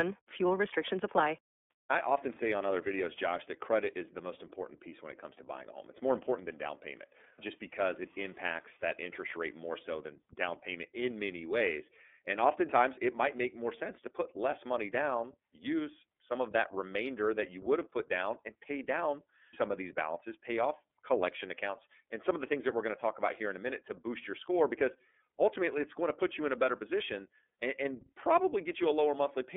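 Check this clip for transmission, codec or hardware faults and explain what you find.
The speech carries iLBC codec damage throughout. The band runs only from about 250 Hz to 3.5 kHz. Each frame's excitation is coded independently, which fits iLBC's 30 ms mode at about 13.3 kbps. This leaves the speech clearly rough and synthetic.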